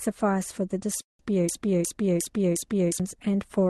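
A speech clip with a call audio freeze from 1.01 to 1.23 s, when the last sound is stretched into a fading buzz that drops to near silence for about 150 ms. This most likely comes from delayed packets draining the jitter buffer. Nothing is lost, but the speech after it arrives roughly 178 ms late. On a spectrogram this shows as smeared horizontal bands thinning into a blank patch. From 1.49 to 3.00 s a broken-record loop plays a 0.36 s fragment four times back to back, likely because the player or stream stalled and kept resending its last chunk. The speech that belonged there is gone, and the waveform shows identical repeating blocks.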